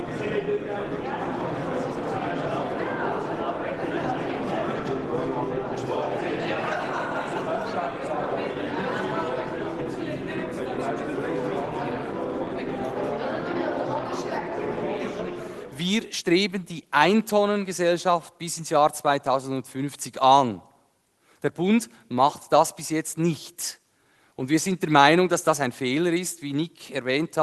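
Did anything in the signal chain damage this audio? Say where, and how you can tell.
No, nothing in the chain from capture through to playback has left an audible mark on this signal.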